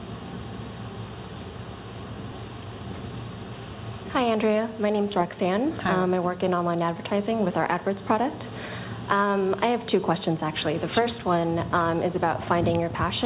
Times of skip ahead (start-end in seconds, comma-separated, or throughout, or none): 2.32-2.34